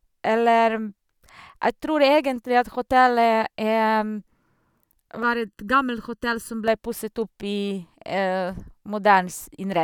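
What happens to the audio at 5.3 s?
Right around there the speech picks up a channel delay, giving comb filtering from about 5.23 s to 6.68 s. One channel lags the other by about 0.7 ms, and when the two fold down to mono the shared content cancels at evenly spaced frequencies, with the first notch at roughly 700 Hz and more stacked above it. So for that stretch the speech sounds hollow and phasey, a bit like it's coming through a tube.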